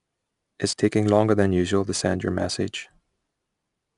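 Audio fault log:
Throughout: 4-bit ADPCM compression. Each sample is coded as a small 4-bit step from a predicted value, and the step size adapts as the speech moves. The coding error is a broadband hiss that rises and falls with the speech level, so loud syllables carry a gritty edge. Sharp onsets distort where the step cannot grow quickly enough. Nothing is present above 10.6 kHz, which fits a rate near 89 kbps. The damage is plainly audible.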